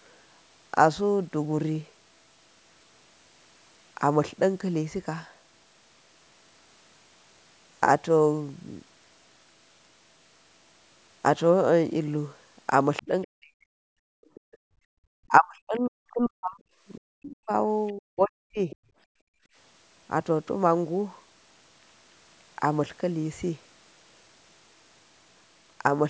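Speech recorded on a call device, with three echo-canceller problems in its middle section. The other side's voice leaking through is heard from 12.97 to 13.27 s, 14.24 to 14.57 s, 17.87 to 17.93 s and 18.70 to 18.76 s, as faint scraps roughly 15 to 30 dB below the talker. The likely cause is that the far end played on the device's loudspeaker and the echo canceller left residue of it in the microphone signal. Speech suppressed in double talk follows from 13.02 to 13.92 s and again from 15.28 to 18.71 s. The talker's voice sinks by as much as around 40 dB or breaks into pieces, for most of a second in the first stretch and roughly two seconds in total across the second. This is likely because both sides spoke together, and the canceller, unable to tell its own talker from the loudspeaker echo, attenuated everything. Background gated by the echo canceller occurs from 14.2 to 15.0 s and from 19.04 to 19.56 s. 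The room sound drops by about 30 dB and then about 27 dB, each time for about half a second in total, then comes back. During loudspeaker playback the canceller pushed the microphone level down hard and released it afterwards, so the ambience pumps in and out.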